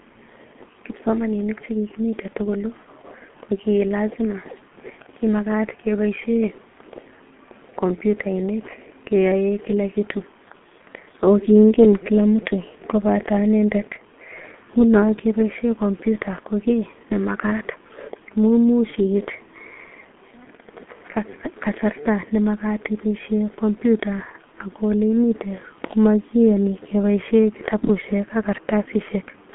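Muffled, hoarse speech with smeared consonants and nothing above 3.7 kHz throughout: heavy G.723.1 codec damage, whose slow 30 ms frames fit a 6.3 kbit/s rate.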